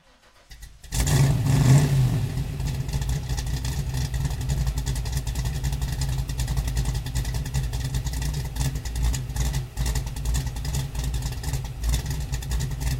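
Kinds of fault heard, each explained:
No faults detected: the sounds in the recording show no dropouts, distortion, noise bursts or timing errors.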